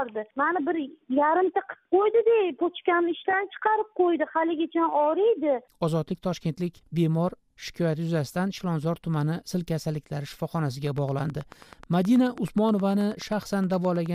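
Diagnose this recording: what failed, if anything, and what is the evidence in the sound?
A train of clicks starts at 10.87 s and runs to 14.07 s, near the end. The clicks arrive at a regular 9.4 per second, roughly thirty in all. Each has much the same shape. They peak at roughly the level of the sound itself, so they tick clearly over it and through any gaps. The stage is likely the analogue wiring, with interference from nearby equipment injecting a repeating pulse into the signal path.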